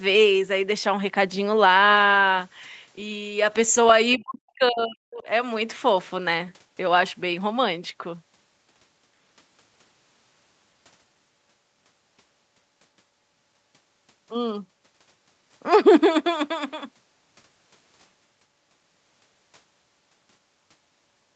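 A speech recording with a brief leak of the other side's voice from 4.12 to 4.17 s, heard as a very faint scrap of a second voice far below the talker. That is likely residual echo from a loudspeaker that the echo canceller missed. Unlike a separate talker in the room, it shows up only for an instant. Right after it, from 4.17 to 5.27 s, the speech is suppressed during double talk. The talker's level falls away deeply, close to silence at its lowest, for about a second in total, likely as the canceller ducks everything while both sides overlap. This differs from a network dropout because it follows the echo. Throughout, the call path's Opus coding limits the audio to nothing above 8 kHz.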